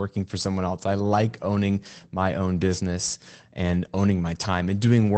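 At 1.03 to 1.05 s and again at 2.15 to 2.17 s, a single 20 ms packet is a lost packet rebuilt from error correction. The following packet carried a coarse low-bitrate copy, which the Opus decoder played instead, so there is no silence. Each spot sounds briefly grainy and rougher. The waveform stays continuous, while the spectrogram shows a thin smeared, noisier slice within the 8 kHz band of the call path.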